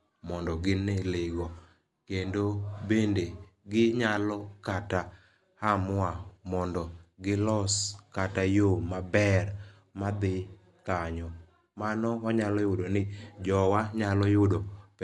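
Right through the speech there's plainly audible codec damage, likely Dolby Digital compression at a rate that fits about 64 kbps. Nothing survives above 11.4 kHz, so it sounds dull, and starved frequency lines filled with noise leave a rough, fluttery haze around the voice.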